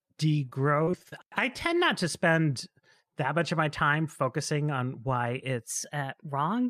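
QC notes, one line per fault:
0.35–1.14 s, repeated packet loss (robotic sound): five short holes, the longest 32 ms, each patched by stretching the preceding sound, so about 14% of the span is filled-in audio. The result is choppy just before "I tend not to".
5.66 s to end, section at the wrong speed: after "time focusing on why" the audio runs 1.12 times fast, raising pitch by about two semitones and hurrying the delivery. This is likely a playback or edit clock mismatch on this final segment.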